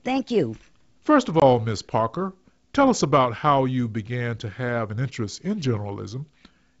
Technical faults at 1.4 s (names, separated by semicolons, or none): packet loss on an ADPCM call